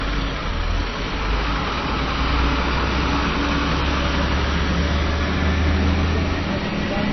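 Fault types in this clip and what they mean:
AAC compression: The sound is dull and smeared throughout, with nothing above 6 kHz and a plainly audible warbling, fizzy grain on sustained and hissy parts. This is likely low-bitrate AAC-LC coding, which fits a rate around 24 kbps. At that rate the encoder cuts the upper band entirely and, below the cut-off, quantises each frame's frequency lines so coarsely that parts of the spectrum drop out or get filled with substitute noise, leaving the shimmering texture.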